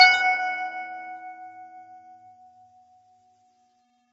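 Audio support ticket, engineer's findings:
Low-delay AAC compression, throughout: rough, grainy music, nothing above 7.8 kHz. Likely AAC-ELD, short frames blurring harmonics; plainly audible damage fits roughly 24 kbps.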